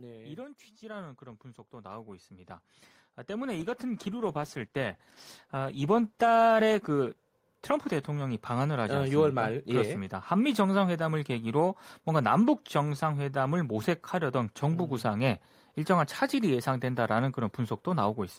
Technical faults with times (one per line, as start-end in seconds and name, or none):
0.79-17.11 automatic gain rising
3.60-8.57 call bitrate drop